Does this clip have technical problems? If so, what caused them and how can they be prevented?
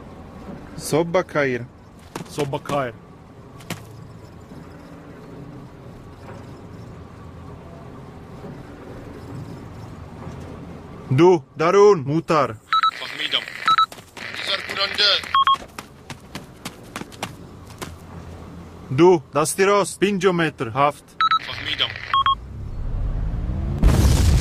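No, there are no technical problems to report here.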